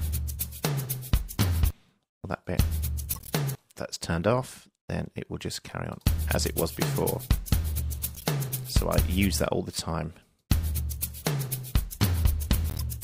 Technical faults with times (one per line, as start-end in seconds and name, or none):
3.11-3.30 corrupt frame decoded
8.15-8.25 corrupt frame decoded
12.70-12.82 corrupt frame decoded